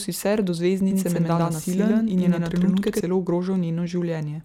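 From 0.91 s to 3.01 s, just after "sicer do", the speech has a doubled audio track. A second full-band copy trails by about a tenth of a second at roughly equal level. It likely comes from a second, slower capture path. The copy starts and stops abruptly.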